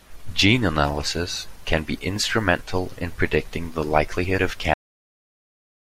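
The final buffers of the recording were never written out, so at 4.74 s the speech is cut off in the middle of a sound. This cut-off end drops straight to digital silence with no natural decay, leaving about 1.25 s of dead air.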